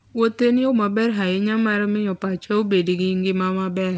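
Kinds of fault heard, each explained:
No faults can be heard in this speech. It carries the sound of a WebRTC call path, with nothing above 8 kHz, which fits a G.722 codec running at 64 kbps.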